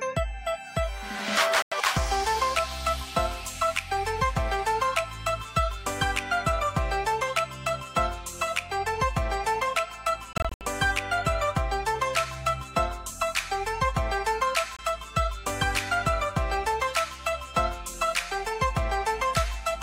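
Bluetooth dropouts occur at 1.62 to 1.72 s, 10.33 to 10.61 s and 14.77 to 14.79 s, likely from wireless packets arriving too late and being discarded. Each hole cuts to silence, and the sound resumes further along as if it had kept playing. The first gap lasts about 93 ms, consistent with four lost packets. The second is a cluster of gaps totalling 163 ms, the longest 70 ms. The last is a brief 23 ms gap, roughly one packet.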